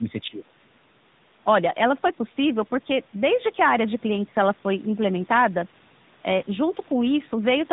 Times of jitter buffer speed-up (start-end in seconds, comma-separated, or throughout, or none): none